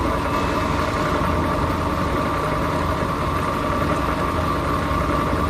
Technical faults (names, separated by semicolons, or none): none